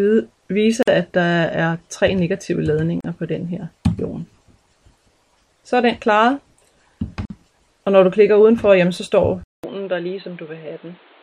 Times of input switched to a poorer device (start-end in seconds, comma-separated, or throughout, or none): 9.44-11.23